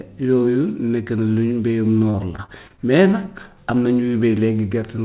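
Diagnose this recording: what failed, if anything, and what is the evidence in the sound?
The network stage failed, causing repeated packet loss (robotic sound) from 2.1 to 2.8 s. The speech turns choppy there, with pieces missing. Several short holes, the longest 38 ms, are each patched by stretching the previous sound. That covers about 120 ms, roughly a sixth of the span.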